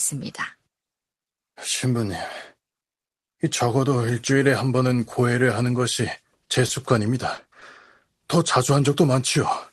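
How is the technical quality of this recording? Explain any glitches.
Three short concealed packet losses occur, at 6.67–6.71 s, 7.35–7.39 s and 7.59–7.63 s. In each, about 20 ms of audio arrived too late. The receiver extrapolated the preceding sound to fill the gap, producing a brief smear or wobble in the speech. The audio carries the coding noise of a call codec, and its top end cuts off around 12 kHz.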